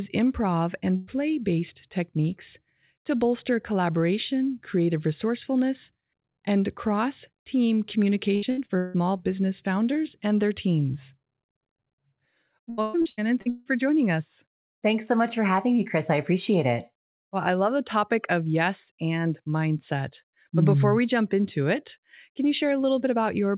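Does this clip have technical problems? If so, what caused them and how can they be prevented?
Yes. A burst of packet loss hits 0.96 to 1.10 s, just before "based techniques to bolster". About 120 ms was lost, and the receiver filled it by stretching the last sound. Larger jitter-buffer headroom and forward error correction would prevent it.

Repeated packet loss causes choppy sound with pieces missing at 8.35 to 8.97 s, between "resourcefulness and cross team" and "business founders and their". It recurs at 12.70 to 13.68 s, before "joining us". Four and then six gaps were patched in quick succession, so about half of each stretch is synthetic. Fixing the unstable network link, or adding redundancy, would prevent it. The call codec, G.711 mu-law, passes nothing above 4 kHz, which is normal for it and not a fault.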